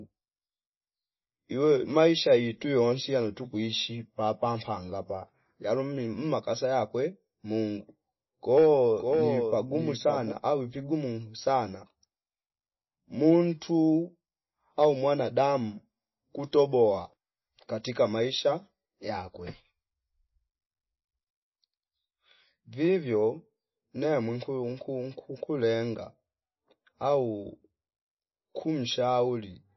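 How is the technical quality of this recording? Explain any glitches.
The recording has clear technical faults: plainly audible compression damage throughout and one short stretch of doubled audio.

MP3 compression, throughout the clip. Nothing is heard above 5.8 kHz, and the speech sounds watery and swirly, with smeared consonants. This is likely a low-bitrate encoder, around 24 kbps, cutting the treble and dropping weak frequency components that flicker from frame to frame.

Doubled audio track, 9.0 to 10.32 s, ending just before "au vigumu sana". A second full-band copy of the speech, about 5 dB quieter, follows roughly half a second behind and starts and stops abruptly, with no room tail. This is likely a slower capture path or an edit holding two copies out of step.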